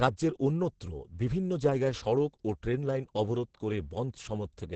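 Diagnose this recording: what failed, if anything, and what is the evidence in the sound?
The codec stage failed: Opus voice compression runs throughout the speech, heavily damaged. SILK's linear-prediction coding caps the band at 8 kHz and quantises the excitation coarsely, giving a muffled, hoarse, slightly robotic voice, which points to roughly 10 kbps. A plain low-pass filter would only dull the sound, without that grainy, synthetic texture.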